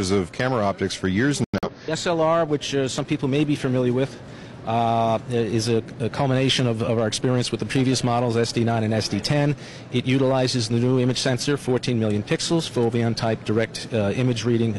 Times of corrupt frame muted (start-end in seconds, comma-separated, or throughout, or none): 1.44-1.69